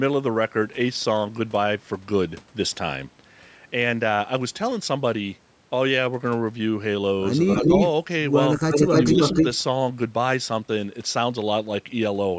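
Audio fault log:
7.54–7.89 s and 8.57–9.58 s, echo leak: a delayed copy of the speech returns about 0.29 s behind the original (286 ms, then 293 ms). It is about 5 dB louder than the speech at first, then roughly level with it, likely loudspeaker pickup that the far end's echo canceller failed to remove.
8.88–8.93 s and 9.14–9.34 s, speech suppressed in double talk: during the second echo burst, the speech dips briefly, by about 15 dB and then about 5 dB, for about 0.12 s in total. The likely cause is the canceller mistaking overlapping talk for echo and attenuating both.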